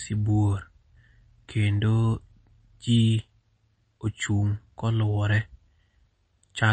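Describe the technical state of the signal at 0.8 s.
At 0.8 s you're hearing what's present across the whole clip: the speech sounds plainly watery and swirly, with nothing above 8.3 kHz. That's likely MP3 compression, and the damage fits a bitrate of about 32 kbps. With that few bits, the encoder chops the top end at a fixed cutoff and drops weaker frequency lines. Those lines flicker on and off from frame to frame, which produces the swirl and the dull, band-limited character.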